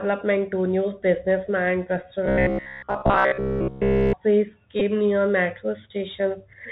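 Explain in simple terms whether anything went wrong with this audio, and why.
Bluetooth CVSD headset codec, throughout the clip: the speech went through the narrow headset link, which carries nothing above 4 kHz. The codec tracks the waveform in small up-or-down steps, so the voice sounds muffled, s sounds come out scratchy, and a grainy hiss sits underneath.

Robotic sound from repeated short buffers, from 2.26 to 4.14 s: the voice turns into a stiff, metallic buzz at about 67 Hz. The likely cause is audio arriving too late, so the software kept replaying the last 15 ms instead of playing new sound. That happened for most of this stretch.

Bluetooth headset packet repeated, at 4.80 to 4.82 s, just before "near metro": some voice data between headset and phone went missing. The chip replayed the previous piece to cover a 15 ms gap, which fits about four lost packets. This makes a brief buzz near 267 Hz.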